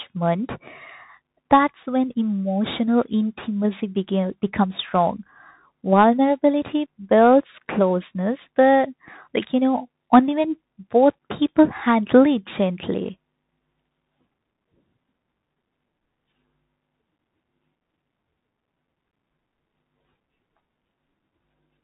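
The speech sounds boxed-in and thin from start to finish, with nothing above about 3.8 kHz, a grainy hiss sitting under every phrase and s sounds that come out scratchy, with loud bright moments breaking up. That points to the Bluetooth CVSD headset codec. It codes each sample as a single up-or-down bit, which fits a 64 kbps stream, and its adaptive step cannot keep pace with fast, loud high-frequency movement, so those passages distort.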